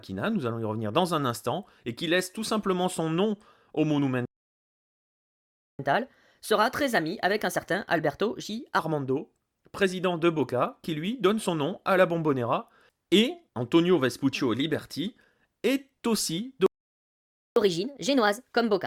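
Playback stalls hit this speech recording at 4.25 to 5.79 s (about 1.54 s) and 16.66 to 17.56 s (0.9 s): the sound halts mid-flow into silence, most likely because the player ran short of data or its thread was blocked. Catch-up at higher speed follows each stall. From 5.79 to 8.79 s the backlog is resampled to 1.15 times normal speed, lifting pitch roughly two semitones. From 17.56 s to the end it runs at 1.25 times, about four semitones high.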